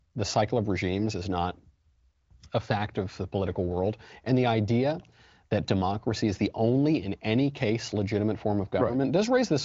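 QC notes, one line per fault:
No faults to note.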